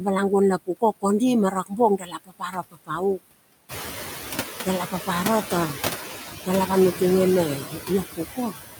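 Speech with noise suppressor artifacts throughout: the suppressor pulls the background down by about 11 dB, leaving it to sink between phrases and swell under speech. Speech cut by the noise suppressor occurs at 1.51–1.79 s, 1.98–3.02 s and 7.57–8.56 s, where softer speech is treated as noise and dips by up to about 17, 21 and 16 dB, affecting roughly 150 ms, half a second and 400 ms respectively. When the room noise steps up by about 12 dB around 3.5 s, settling roughly 7 dB below the speech, the noise suppressor is catching up from 3.68 to 3.89 s: the louder noise passes with reduced attenuation until the estimate adapts over 210 ms, then sinks by about 8 dB.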